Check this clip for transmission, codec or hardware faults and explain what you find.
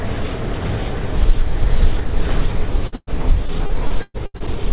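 Two kinds of transmission fault are audible in this recording of everyday sound, both from packets lost on the way to the receiver. The audio is band-limited with nothing above 4 kHz, which fits a G.711 mu-law call path at 64 kbps.

A burst of packet loss runs from 2.87 to 2.95 s and continues straight into a second burst ending at 3.10 s. The receiver patches the holes by extending the last sound it received and fading it, so the audio smears into a held, decaying hiss. The concealment runs out before the second burst ends, leaving about 40 ms of silence. When playback resumes, roughly 180 ms of the original sound is simply missing.

Repeated packet loss (robotic sound) follows from 3.46 to 4.50 s. Packets drop out eight times in quick succession, and each gap is filled by stretching the previous fragment, the longest by about 117 ms. Because the gaps come so close together, about a third of this stretch is patched rather than real sound. 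The result is choppy, with short pieces missing throughout.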